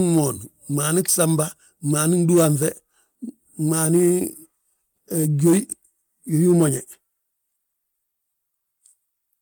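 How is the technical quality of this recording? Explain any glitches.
Two short rough patches in the speech, both cases of a lost packet rebuilt from error correction. The first runs from 1.37 to 1.39 s, about 20 ms, which fits a single lost packet. The second runs from 6.73 to 6.79 s and covers 40 ms, which sounds like two separate lost packets. Each missing packet was replaced by the low-bitrate backup copy carried in the next one, so there's no dropout. Those stretches just come through grainier and noisier for a moment.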